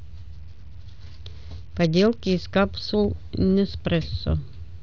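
From 0.35 to 2.42 s the speech turns dull and muffled, with a gritty, granular noise riding on it until clarity returns. This is a Bluetooth SBC bit pool drop: the encoder starved of bits left the upper sub-bands nearly empty and quantised the rest coarsely, which fits a fall to roughly 72 kbps.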